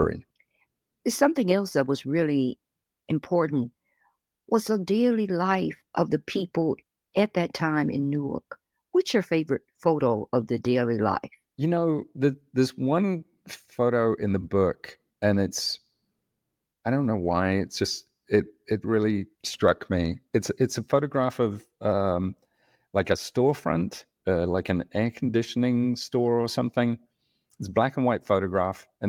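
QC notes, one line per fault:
Nothing stood out on listening to this speech recording.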